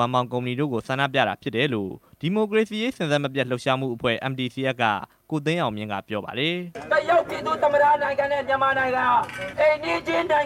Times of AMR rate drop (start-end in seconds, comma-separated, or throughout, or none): none